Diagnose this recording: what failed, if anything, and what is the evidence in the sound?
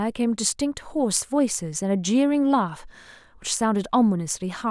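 Nothing failed: no stage of this recording shows a fault, and the sound carries no evidence of one.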